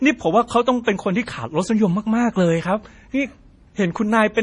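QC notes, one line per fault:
Throughout, MP3 compression, likely. Nothing is heard above 10.5 kHz, so the speech sounds dull. Weak frequency lines drop in and out between frames, giving a heavy watery, swirly texture. The damage fits a low bitrate near 32 kbps.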